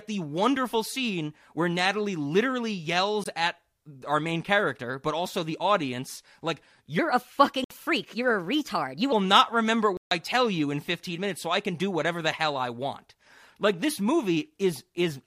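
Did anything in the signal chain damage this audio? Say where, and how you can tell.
Yes. The wireless link to the headphones likely dropped audio packets, leaving silent gaps that resume as though the sound had kept running. This Bluetooth dropout occurs at 3.24 s, a 20 ms hole just before "at our main character"; at 7.64 to 7.71 s, 61 ms; and at 9.97 to 10.11 s, 142 ms, between "not remember" and "I tell you in". The gap lengths fit roughly one, three and seven lost packets.

From 6.99 to 9.12 s, after "also the audience like" and up to "not remember", there is a section at the wrong speed. It plays 1.19 times fast, so the speech is hurried and raised by about three semitones. Speed and pitch shift together, and the switch is abrupt at both ends. That points to a playback or editing stage that likely ran this stretch against the wrong sample clock, rather than a codec or network fault.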